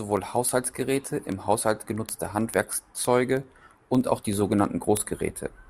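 A digital link feeding this speech clip is read by a device on its own clock rather than locked to the sender. The two clocks drift apart by a few hundred parts per million, so a single sample is dropped or repeated each time they slip past each other. The result is word clock ticks: around a hundred sharp clicks of uneven strength, repeating steadily about every 70 ms from 0.1 s to 5.67 s.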